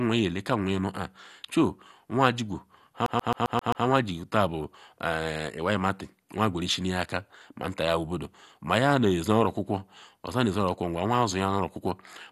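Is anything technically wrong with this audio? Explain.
Yes, there are two problems. Throughout the speech there is a dull, gurgling, granular quality with nothing above 12.2 kHz, which points to MP2 compression as the likely cause, at a rate that fits roughly 64 kbps. Layer II divides the spectrum into 32 equal sub-bands and shares out bits among them. When bits are short, upper bands drop out entirely and the remaining ones are coarsely quantised. That produces the plainly audible codec damage here. On a spectrogram there is a hard ceiling at 12.2 kHz, with blocky patches flickering in and out just below it.

From 3.06 to 3.86 s the clip behaves like a CD stuck on one turn. A scratch keeps sending the laser back one track at the same point, so a 132 ms slice of speech repeats six times, with a short mute at each jump. It is heard as a rapid, evenly spaced stutter. The waveform shows six identical segments in a row, separated by brief gaps. 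The spectrogram shows the same pattern tiled across that stretch.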